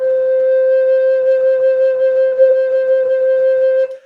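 A music clip with a short concealed packet loss at 2.27 to 2.36 s. About 40 ms went missing. The decoder filled it by extending the preceding sound, causing a brief smear.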